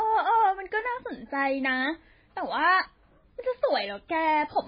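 Throughout the recording, the audio has likely passed through heavy MP3 compression at a very low bitrate, consistent with something near 16 kbps. Starved of bits, the encoder discarded everything above 5 kHz and zeroed many weaker frequency lines, letting them drop in and out between frames. The speech therefore sounds dull and band-limited, with a watery, swirling texture, metallic chirps on sibilants, and smeared consonant attacks.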